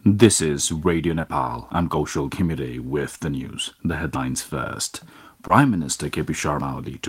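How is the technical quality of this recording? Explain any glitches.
The recording has two recurring kinds of glitch, three of each.

Short concealed packet loss occurs at 1.21–1.25 s, 3.17–3.21 s and 5.47–5.51 s. Each time about 20 ms of the stream arrived too late and the decoder filled it by extending the preceding sound, leaving a brief smear or wobble.

Audio missing between chunks is heard at 1.70 s, 4.15 s and 6.60 s as abrupt skips, each dropping roughly a twentieth of a second. The spacing of about 2.5 s likely reflects a recorder losing audio at each chunk boundary.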